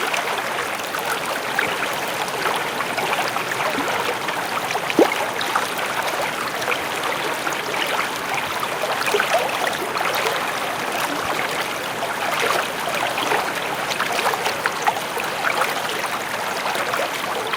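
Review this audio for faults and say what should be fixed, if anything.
Nothing in the audio calls for a fix. No faults turn up anywhere in the recording, so it can stay as it is.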